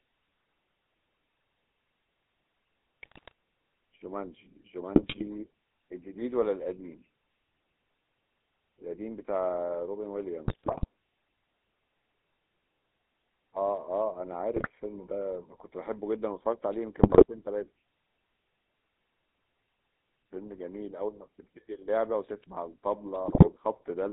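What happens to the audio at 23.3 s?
Around 23.3 s you're hearing GSM bit errors, running from about 23.24 to 23.49 s. Over that quarter second, corrupted bits get into the decoder, so the filter, pitch and gain values it rebuilds from are wrong frame by frame. That bends the spectrum and spikes the level, and the speech collapses into squawks, pops and gargling. The length fits roughly a dozen bad 20 ms frames in a row on a weak link.

Under that, and through the whole clip, there's the GSM full-rate codec. It models the vocal tract and drives it with a sparse, regularly spaced pulse excitation, which fits the 13 kbit/s full-rate coder. The band sits between about 300 Hz and 3.7 kHz, so the top end is gone, and the codec damage is plainly audible as a buzzy, gravelly roughness on the speech.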